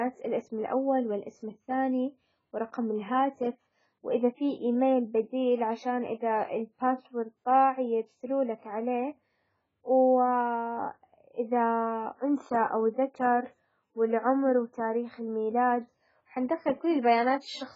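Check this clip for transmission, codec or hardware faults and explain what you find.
The speech carries codec damage from start to finish, most likely AAC compression at a very low bitrate, consistent with about 12 kbps AAC-LC. Nothing sounds above 7.6 kHz, and the remaining band is smeared and warbly, with fizzy sibilants. A simple low-pass filter would dull the top but leave what remains clean.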